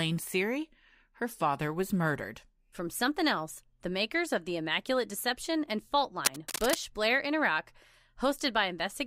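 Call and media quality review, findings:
Cable scratch noise, 6.25–6.76 s: dense irregular scratching over speech, about 5 dB below signal. Likely worn cable or connector moved, contact resistance fluctuating rapidly.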